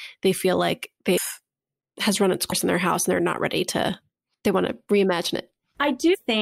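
At 6.13 to 6.15 s the speech lurches forward with a short smeared blip instead of a clean click. These are compressed frames skipped: roughly five frames, around a tenth of a second of audio, were never played, a jump that fits 23.2 ms frames.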